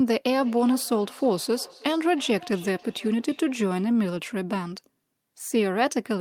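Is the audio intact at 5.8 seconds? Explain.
Yes, the speech at 5.8 seconds plays through intact, with no dropout, click, distortion or other fault at that moment.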